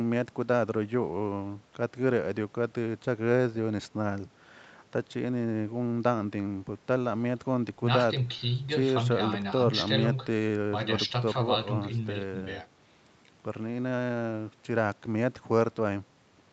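No technical faults can be heard anywhere in this speech recording. It has the sound of a normal call path, with the Opus codec and the microphone processing leaving nothing above 8 kHz.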